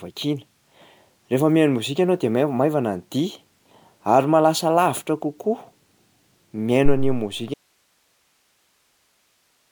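Throughout, the speech sounds swirly, smeared and hollow, with blurred attacks: likely generation loss from repeated MP3 encoding, around five passes at something like 128 kbit/s. At 6.85 s a deep thump dies away in about 0.1 s, lasting until 7.32 s. This is a phantom power thump, where a supply switching on a live input pushes a voltage step through the coupling capacitors. From 7.54 s to the end, the speech cuts off abruptly, leaving only hiss some 45 dB below it. This is an audio dropout to a faint residue: the signal was likely lost while the downstream path stayed live.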